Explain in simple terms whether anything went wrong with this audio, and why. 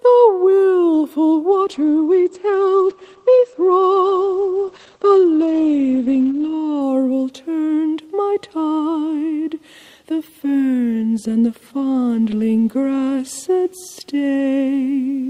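Something went wrong in the call's connection: a call bitrate drop runs from 1.52 s to 6.87 s. The link's estimate of available bandwidth fell, so the encoder was told to squeeze the audio into far fewer bits, and it stayed at that low setting for about 5 seconds. With so little data, the sound is coded more coarsely and everything above 8 kHz is cut away (normally it reaches 20 kHz), leaving the audio rough and muffled until the bitrate recovers at 6.87 s.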